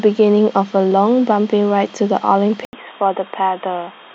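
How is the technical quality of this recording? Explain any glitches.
The recording has one clear fault. From 2.65 s to the end, the input likely switched to a poorer device: after an 80 ms gap, the speech turns dull, with nothing above 3.8 kHz and a faint new noise floor.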